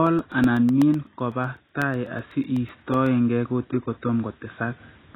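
From the first moment to the end, the speech sounds dull and smeared, with a watery, fizzy texture and nothing above about 3.9 kHz. The likely cause is heavy AAC compression, with AAC-LC at a very low bitrate, consistent with about 16 kbps, cutting the top band and coarsely quantising the rest.

From 0.07 s to 3.07 s a steady tick recurs every 0.125 s, roughly thirty times. These are periodic USB or driver dropouts: the audio path stalls at a fixed interval and about a millisecond of signal is lost and replaced with silence each time.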